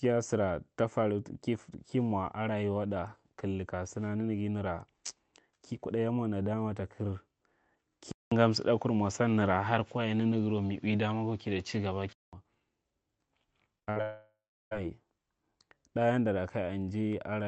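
From 8.1 to 12.3 s the input likely switched to a poorer device. After a 200 ms silence the speech turns duller, with nothing above 7.6 kHz, a level shift of about 5 dB, and a faint new background noise.

At 13.79 s and from 13.83 to 13.89 s, short concealed packet loss dropped 20 ms and then 40 ms of audio. The receiver extended the preceding sound to cover each gap, leaving a brief smear.

From 13.91 to 13.98 s a burst of packet loss removed 40 ms. The concealment held the last sound and let it fade before the speech resumed.

From 14.02 to 14.73 s a likely long network dropout lost 700 ms of speech. The gap is bridged by a decaying continuation of the last sound, followed by 330 ms of silence, and the speech then returns with that stretch missing.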